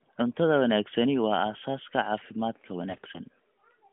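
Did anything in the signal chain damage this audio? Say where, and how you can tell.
Yes. In the network stage, a weak radio link corrupted the AMR speech stream from 2.90 to 3.20 s. These are AMR bit errors: around a tenth of the less protected bits flipped while the frames still passed as valid. Pitch and level hold, but the sound turns hoarse, scratchy and gargly because excitation pulses and fine gain and spectrum values were decoded wrongly. The narrowband codec's 200 Hz to 3.5 kHz band is audible throughout.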